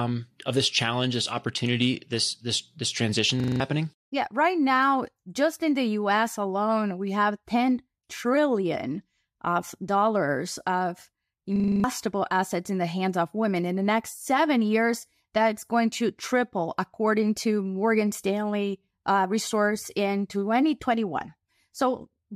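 System hang loop at 3.4 to 3.6 s, after "this transition", and at 11.56 to 11.84 s, between "trillion of dollars of" and "assets in the hands": the playback froze while the hardware kept replaying one 40 ms buffer, giving a rattling 25 Hz buzz. Each instance replaces a fraction of a second of the speech.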